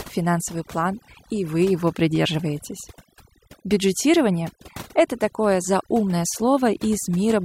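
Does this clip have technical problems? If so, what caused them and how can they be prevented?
Yes. Throughout the speech, the background drops and breaks up into twinkling specks. This is overdone noise removal: a noise reducer set too strong switches off frequency bands near its noise estimate, stripping quieter voice detail too. Prevent it by using gentler reduction settings.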